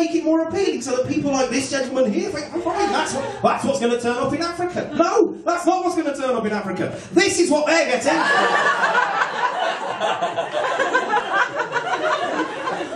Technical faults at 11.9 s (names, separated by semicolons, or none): none